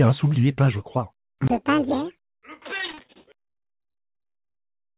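From 2.78 to 4.57 s the audio turns choppy and robotic, with a stuttering texture. This is repeated packet loss: many short holes, none longer than 44 ms, were patched by stretching the preceding sound, so about a third of that stretch is concealment rather than real signal. The audio carries nothing above 4 kHz, which points to a narrowband call codec such as G.711.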